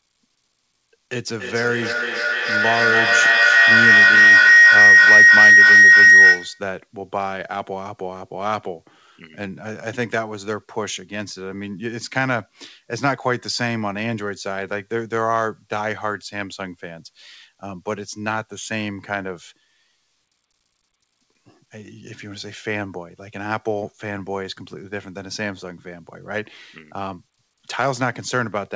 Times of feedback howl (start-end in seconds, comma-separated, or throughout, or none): 1.39-6.68